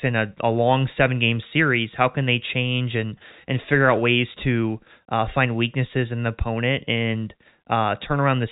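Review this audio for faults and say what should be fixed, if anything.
No faults; nothing needs fixing.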